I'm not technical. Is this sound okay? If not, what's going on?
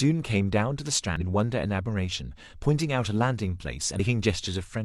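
No. Twice the speech is broken by a brief glitch, from 1.16 to 1.21 s and again from 3.95 to 4.00 s, each lasting about a twentieth of a second. This is damaged data in a compressed stream: a few pieces of the compressed file were corrupted, so the player couldn't read those moments properly, glitched, and then found its place again.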